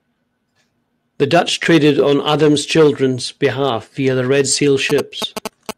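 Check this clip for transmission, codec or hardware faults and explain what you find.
Two faults are audible. At 1.63 to 1.67 s, short concealed packet loss: about 20 ms never arrived, so the decoder extended the preceding sound, giving a brief smear rather than a clean dropout gap. From 4.90 s to the end, GSM signalling bursts: a nearby 2G phone's radio pulses are rectified into galloping ticks and a 217 Hz buzz, nearly as loud as the speech. This rhythmic pattern sets it apart from steady mains hum.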